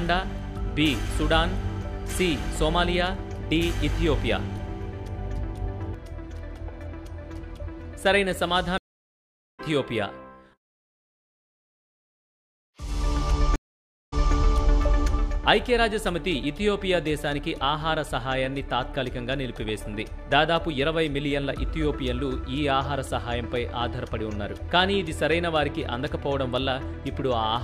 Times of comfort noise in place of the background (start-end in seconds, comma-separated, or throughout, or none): none